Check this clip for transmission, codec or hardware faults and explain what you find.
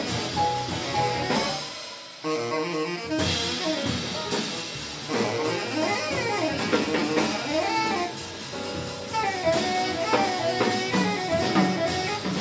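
No transmission, codec or hardware faults are audible here.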